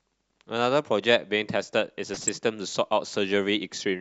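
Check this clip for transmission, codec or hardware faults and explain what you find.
There's one fault in this speech clip: DAB burbling from about 2.13 to 2.29 s. Weak reception let bit errors slip past error correction into the MP2 data, so wrong samples put short blips of noise into individual sub-bands. It sounds like a short burst of burbling over the speech, consistent with around seven damaged frames at a bit error rate of a fraction of a percent.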